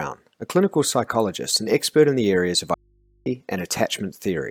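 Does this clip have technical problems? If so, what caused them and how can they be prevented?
Yes. An audio dropout to a faint residue runs from 2.74 to 3.26 s, after "in the areas of". The waveform abruptly collapses to a thin band, and the spectrogram shows only low hum lines about 40 dB down. This was likely caused by an interrupted upstream connection while the input stayed live. Securing cables and connectors and monitoring levels during recording would prevent it.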